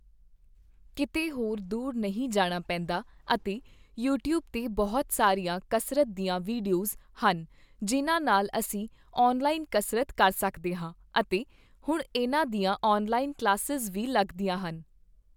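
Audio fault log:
Nothing to log here; the speech comes through without a single problem worth noting.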